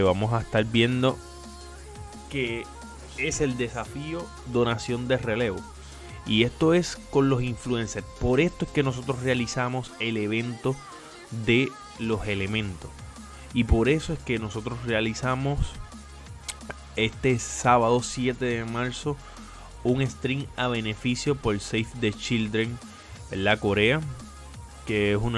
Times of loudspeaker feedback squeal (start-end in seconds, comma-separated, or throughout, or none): none